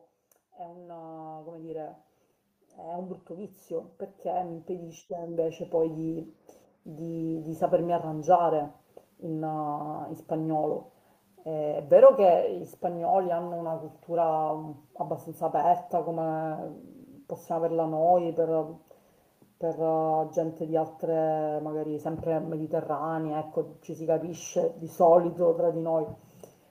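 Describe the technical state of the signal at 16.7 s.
At 16.7 s the signal is intact, with no audible fault at that point.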